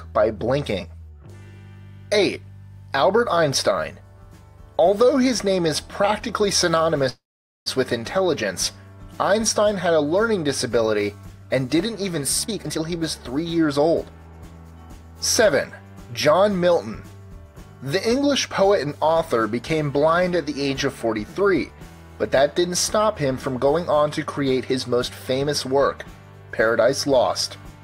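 At 7.09 s the sound stretches into a short fading continuation of the last sound, then drops to silence for about half a second before resuming at 7.68 s with nothing lost. This call audio freeze likely came from delayed packets draining the jitter buffer, inserting a 0.57 s gap.

From 12.43 to 14.72 s the audio runs hurried, about 125% of normal speed, at unchanged pitch. This jitter buffer speed-up trims small pitch-period slices repeatedly, removing roughly half a second to shed the excess delay built up earlier.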